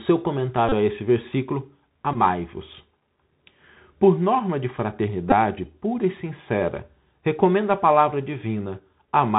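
From the start, the speech has the Bluetooth CVSD headset codec sound. The codec tracks the waveform one bit at a time, up or down, at 64 kbps. That caps the band at 4 kHz, so everything sounds boxed in and telephone-like. The damage is plainly audible: a grainy hiss sits under the speech, s sounds come out scratchy, and loud bright moments distort because the adaptive step can't keep up.

Then there are three dropouts where a Bluetooth headset packet was repeated. The first runs from 0.69 to 0.73 s, the second from 2.13 to 2.16 s, and the last from 5.30 to 5.34 s. Each time, voice packets went missing on the link and the chip replayed the last good packet over and over. The sound points to about 30 ms lost in the first gap and about 15 ms in the other two. That repeating makes a short, steady buzz near 267 Hz, and it stops once clean packets arrive again.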